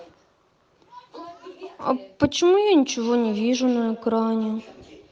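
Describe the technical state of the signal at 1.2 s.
At 1.2 s the speech signal is intact, with no audible fault at that moment.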